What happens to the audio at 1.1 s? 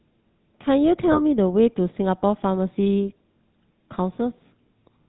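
At 1.12 s the audio is hit by lost GSM frames, with the disturbance running to about 1.21 s. A corrupted frame was discarded and the decoder reused the vocal-tract and excitation settings of the last good frame, repeating them. The gap is short, which fits a single lost 20 ms frame, so it never decays to silence. It is heard as a brief rough, metallic ring in place of the real sound.

Underneath that moment, and across the whole clip, is the GSM full-rate codec, at a rate that points to the standard 13 kbps mode. It models the vocal tract and drives it with regularly spaced pulses, keeping only one in three excitation samples, and passes nothing above 4 kHz. The codec damage is plainly audible as a buzzy, gravelly roughness and a dull top end.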